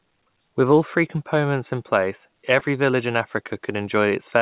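A brief smear interrupts the speech at 2.59 to 2.62 s, between "three components in place" and "village in". This is short concealed packet loss: about 20 ms of the call's 4 kHz-limited audio arrived too late, and the receiver patched the gap by extending the preceding sound before blending back into the real audio.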